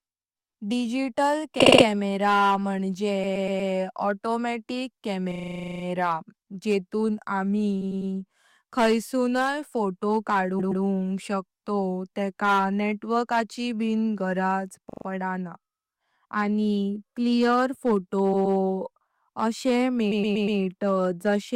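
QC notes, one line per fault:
Throughout, hard clipping: the speech is driven about 9 dB past full scale, so roughly one percent of samples have their peaks sliced flat. Those flattened tops add high harmonics, heard as crackle and harsh edges on louder syllables.
1.59–1.86, 3.23–3.71, 5.31–5.84, 7.81–8.11, 10.59–10.83, 14.89–15.05, 18.33–18.57 and 20.11–20.59 s, repeated frames: short blocks of 40 to 120 ms replay two to thirteen extra times, each adding 160 to 520 ms. Examples include the rapid 40 ms stutter right after "म्हणजे ऑटोमॅटिक" and the 120 ms loop just before "शकतोव तेका नेटवर्काची बी".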